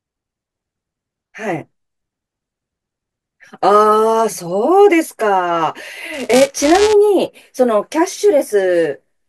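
From 6.13 to 6.93 s the speech takes on a steady robotic buzz at about 345 Hz: buffer tearing. The writer and the hardware reader of the ring buffer have slipped, so a small slice of each period, a few percent, replays audio roughly 10 ms old, with hard joins on either side. The rate fits a 128-sample buffer. Unlike random dropouts or crackle, the rattle is evenly periodic, leaves no silent gaps, and follows the signal.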